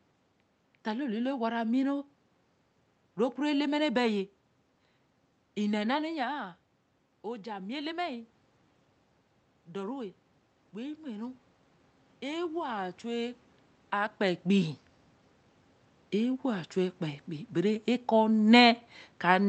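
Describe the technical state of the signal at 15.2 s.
At 15.2 s the speech signal is intact, with no technical fault present at that moment.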